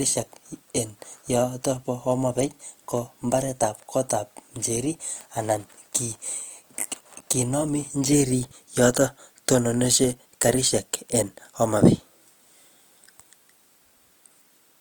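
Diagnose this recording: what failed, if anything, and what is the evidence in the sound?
Codec stage: throughout, the speech sounds grainy and rough with little swirling and few spectral holes, with content reaching about 20.2 kHz, likely Opus compression in CELT mode at roughly 24 kbps.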